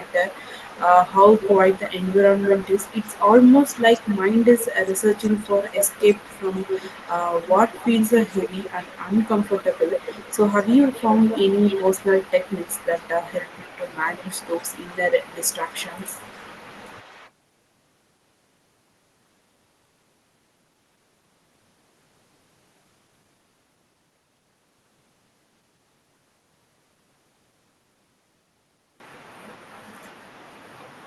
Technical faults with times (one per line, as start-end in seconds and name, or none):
1.03-17.30 echo leak